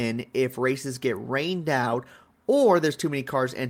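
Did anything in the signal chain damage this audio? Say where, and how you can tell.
No, nothing in the signal chain stood out as damaging this speech on listening.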